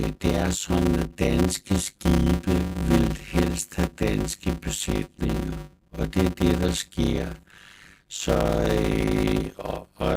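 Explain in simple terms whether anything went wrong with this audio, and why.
A steady buzz runs under the speech from start to finish, pulsing about 100 times a second, and everything plays slowly, at roughly half speed (0.533 times normal), yet the character of the voice stays the same. The cause is a block size mismatch (padded). One stage hands over short chunks of sound, which fits 256-sample blocks, and the next stage expects longer ones, so each gap is filled with silence. Those repeated tiny silences create the buzz and stretch out the timing.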